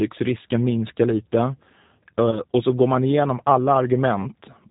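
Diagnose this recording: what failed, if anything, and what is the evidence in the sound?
G.729 codec, throughout the speech. This is a codec-stage fault. Nothing is heard above 4 kHz, and the voice has a plainly audible rough, synthetic edge, which fits the 8 kbit/s G.729A variant. The decoder rebuilds each 10 ms frame from a vocal tract filter, a pitch predictor and a handful of pulses rather than the actual waveform. The missing fine detail comes out as that buzzy, slightly artificial texture.

VoIP packet loss concealed by the speech codec, from 2.31 to 2.42 s just before "och så går man", and again from 4.22 to 4.26 s. This is a network-stage fault. Each gap fits a single lost 20 ms packet. The decoder fills the hole by repeating its last pitch and filter at falling gain, so the sound smears into a brief fading buzzy tone or coloured noise. Because the next frames build on that guessed state, the voice stays weak or distorted past the 20 ms loss.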